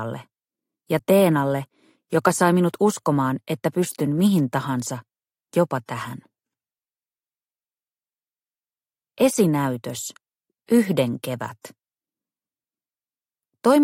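Nothing here calls for comment, since there isn't a single technical fault to point to anywhere in the clip.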